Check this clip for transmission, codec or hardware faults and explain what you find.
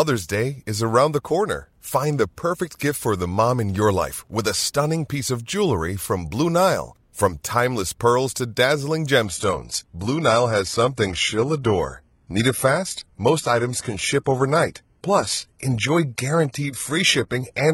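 One fault is present: an adaptive stream at a lower bitrate. From 9.25 s to the end of the speech, the treble suddenly thins and turns synthetic and swirly, with more smearing and warbling codec artefacts, yet there is no gap or dropout. The player switched to a cheaper rendition when the connection slowed. The sound fits a move from 96 kbit/s AAC-LC to 16 kbit/s HE-AAC, whose upper frequencies are synthesised rather than fully coded.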